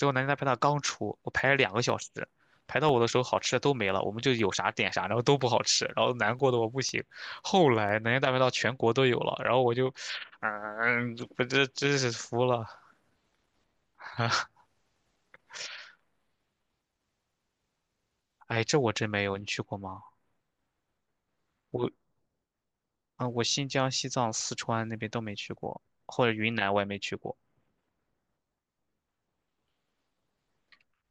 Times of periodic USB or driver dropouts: 0.39-7.89

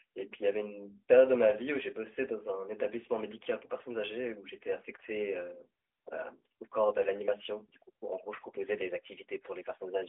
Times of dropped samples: none

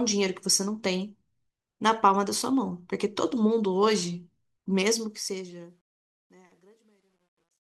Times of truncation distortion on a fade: 4.86-7.73

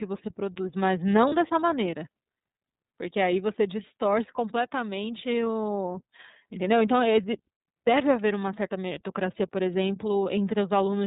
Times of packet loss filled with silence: none

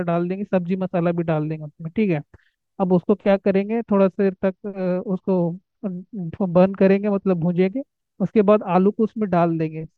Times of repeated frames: none

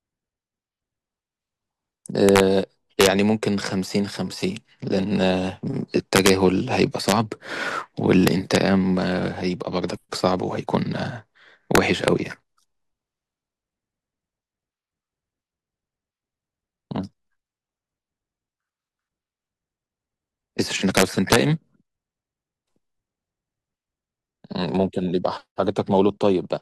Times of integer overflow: 2.29-2.40, 3.01-3.07, 6.16-6.29, 7.09-7.12, 8.27-8.56, 11.75-12.08, 20.97-21.36

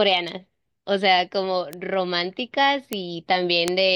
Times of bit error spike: 1.73, 2.93, 3.68

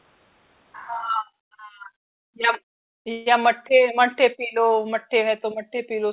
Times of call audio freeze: 3.12-3.28

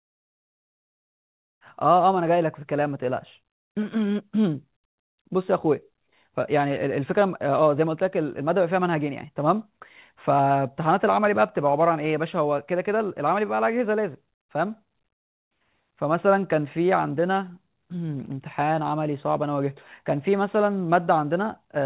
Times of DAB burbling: none

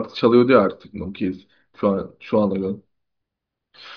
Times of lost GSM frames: none

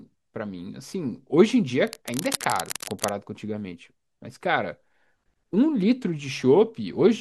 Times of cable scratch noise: 1.87-3.10

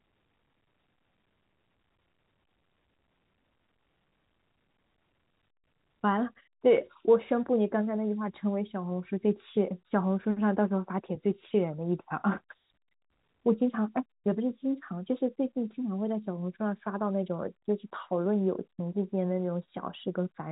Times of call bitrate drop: none

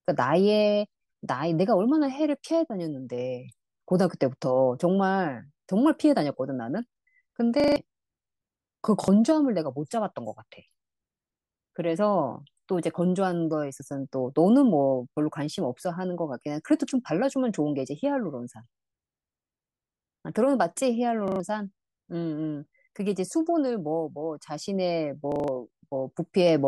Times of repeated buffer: 7.60-7.76, 9.04-9.08, 21.28-21.40, 25.32-25.48

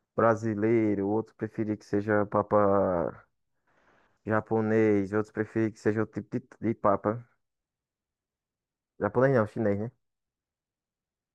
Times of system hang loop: none

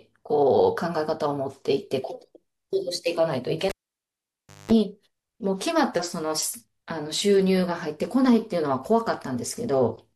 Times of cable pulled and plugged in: 3.69-4.71

